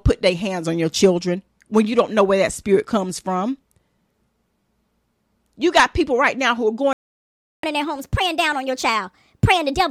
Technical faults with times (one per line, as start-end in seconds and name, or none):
6.93-7.63 playback stall
7.63-9.90 catch-up at higher speed